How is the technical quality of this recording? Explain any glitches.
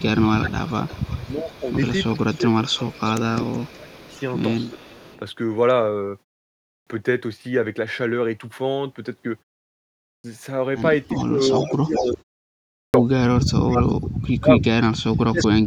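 The recording has clear technical problems: speech keeps dipping, a delayed copy of the voice returns several times, and three phrases lose their openings.

Speech suppressed in double talk occurs from 0 to 1.75 s, 2.15 to 4.11 s, 11.14 to 13.71 s, and 14.35 s to the end. The voice sinks by about 20 dB in the first two stretches and about 35 dB in the later ones, thinning or breaking up. The likely cause is an echo canceller that could not separate the local talker from loudspeaker echo during overlapping talk, so it ducked both.

Echo leak brings back a delayed copy of the voice. From 0.41 to 5.19 s it trails by 0.37 s at about 20 dB down. From 11.18 to 12.11 s it trails by 0.4 s at about 10 dB down. From 13.72 to 14.19 s it trails by 0.4 s at roughly full level. From 15.39 to 15.47 s it trails by 0.41 s at about 10 dB down. This is likely a speakerphone's canceller letting part of its microphone pickup through.

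A clipped start after a pause occurs at 6.46, 9.83 and 12.51 s. Each time speech bursts abruptly out of silence with its opening missing: about 0.41, 0.41 and 0.43 s are lost after pauses of 0.3 to 0.48 s. The output device drops into sleep during silence and needs that long to wake.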